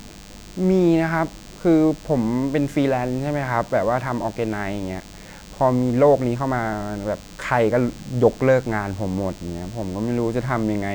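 A thin, steady buzz at 100 Hz, rich in harmonics and sitting roughly 25 dB below the speech, runs from start to finish. It is DECT cordless phone buzz: a nearby DECT handset or base transmits a radio burst every 10 ms, and the audio circuitry rectifies it into sound.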